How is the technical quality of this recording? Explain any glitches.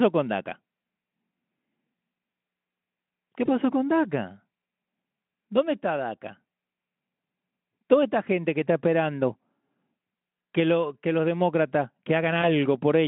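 Two brief glitches come from VoIP packet loss concealed by the speech codec, on a narrowband Speex line that carries roughly 150 Hz to 3.4 kHz.

At 3.45 to 3.49 s, and again at 12.42 to 12.48 s just after "lo que los demócratas", a single 20 ms packet went missing. The decoder filled each gap by extending its last pitch and filter at falling gain, so the speech briefly smears into a buzzy tone or coloured noise that fades before recovering.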